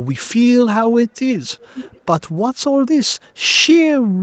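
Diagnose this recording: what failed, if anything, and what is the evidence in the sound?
The failure is an echo leak at the call-processing stage. From 1.48 to 2.01 s, a faint delayed copy of the speech trails the direct sound. It sits roughly 15 dB below the talker and lags by about 0.49 s. That long, fixed delay points to a round trip through a far-end loudspeaker and microphone. The far side's echo canceller likely failed to subtract its own pickup, so the residue came back. The band above 8 kHz is empty, as the call codec sets it.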